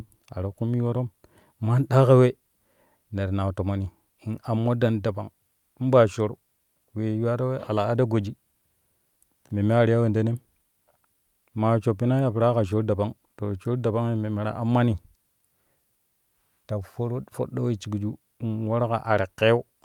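No technical faults detected.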